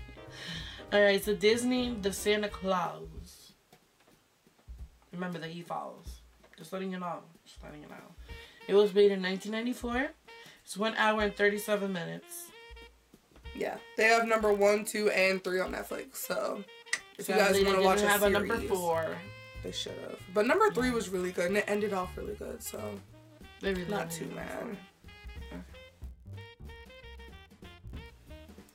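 From 13.55 s onward, a block size mismatch (padded) appears. Zero-filled gaps in each block cause a 43.1 Hz buzz, fitting 1024-sample reads.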